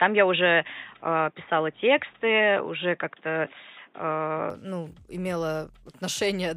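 Until 4.50 s the speech is dull and boxy, cut above 3.8 kHz, then clears seamlessly, likely from an input switched to a poorer device.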